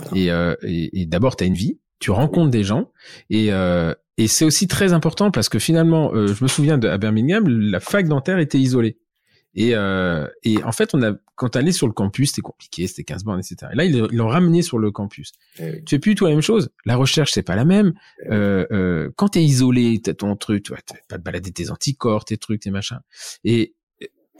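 At 1.53 s, between "d'abord tu as une" and "vie tu rencontres des", and again at 19.32 s, between "eh euh euh quand" and "isolé t'as ton truc", compressed frames are skipped. About 30 ms of speech vanishes each time, which fits one lost frame of 26.1 ms. The waveform shows an abrupt phase jump, and the spectrogram a thin vertical seam where harmonics break.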